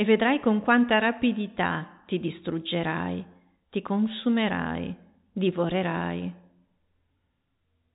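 Speech carried over an ordinary telephone-band channel that tops out near 3.8 kHz, with no faults to report.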